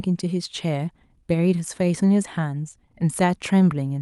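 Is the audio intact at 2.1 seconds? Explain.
Yes, at 2.1 s the speech is intact, with nothing beyond the ordinary coding of the WebRTC call path, whose band limit of about 12 kHz fits an Opus codec.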